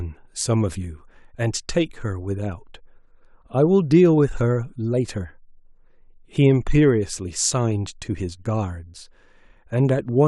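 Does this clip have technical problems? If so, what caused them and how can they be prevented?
Yes. Clock slip clicks run from 0.40 s to 10.22 s: faint, evenly spaced ticks roughly every 0.4 s, around thirty in all, clearest where the speech is loudest and sustained. Each tick is a single sample dropped or repeated, which likely comes from two devices running on separate clocks that drift apart by something near 50 parts per million until the gap adds up to one whole sample. Preventing it means locking every device to one shared word clock, or resampling at the boundary between them.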